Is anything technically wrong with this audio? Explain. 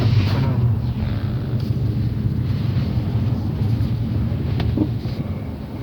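No, nothing here sounds technically off; the audio comes through just fine with no glitches or problems worth pointing out.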